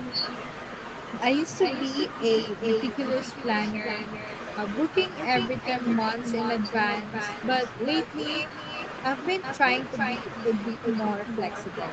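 Echo with no canceller, throughout: the far end's loudspeaker feeds its microphone, returning each phrase roughly 0.4 s later, about 7 dB quieter, thin, band-limited to 8 kHz.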